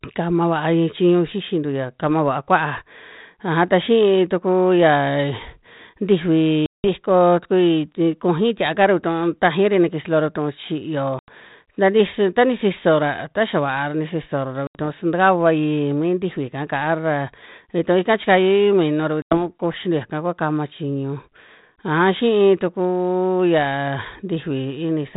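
Packet loss on an ADPCM call punches silent holes at 6.66, 11.19, 14.67 and 19.22 s, lasting 180, 90, 80 and 90 ms. The decoder's predictor drifts, so speech comes back briefly slightly distorted.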